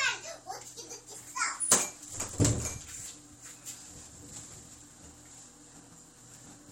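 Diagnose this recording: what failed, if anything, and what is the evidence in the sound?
Nothing failed; no faults heard.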